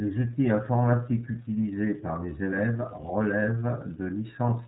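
From start to finish the speech carries the sound of the iLBC codec. Nothing above 4 kHz survives, so it sounds narrowband and muffled. Each short frame's excitation is coded on its own, which fits 30 ms frames at roughly 13 kbps and leaves a plainly audible rough, synthetic edge.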